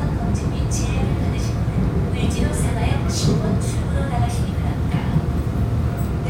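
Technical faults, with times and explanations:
No technical faults detected.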